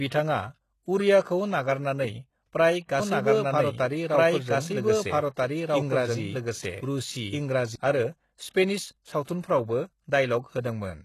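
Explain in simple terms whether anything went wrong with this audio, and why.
Three things went wrong. First, the whole clip was likely squeezed through HE-AAC compression, which stores only the lower frequencies and rebuilds the treble by copying lower bands upward. The codec damage is plainly audible, and nothing above 12.3 kHz survives.

Second, from 2.99 s to 7.76 s there is a doubled audio track, likely from the same speech being mixed in twice, once through a slower path. The copy trails about one and a half seconds behind, about as loud as the original, and starts and stops abruptly.

Third, at 9.23 s there is pre-echo. The codec spreads its noise across a whole block of audio, so a sudden attack late in the block leaks hiss into the quiet moment before it, here smearing about 45 ms ahead of the sound.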